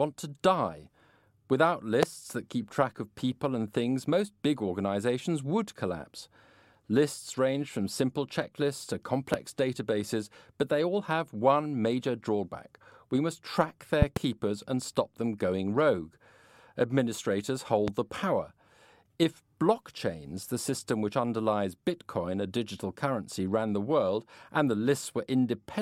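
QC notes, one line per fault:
2.03–2.05 s, 9.34–9.36 s, 14.02–14.19 s (a double), 17.88–17.90 s: loud pop. Sharp thumps about 20 dB above the speech (about 15 dB at 17.88 s) sit over continuing talk, before "that keep track of", after "from simple checklists to", and before "the power". They are likely electrical transients added to the signal, showing as tall waveform spikes and thin broadband vertical stripes on a spectrogram.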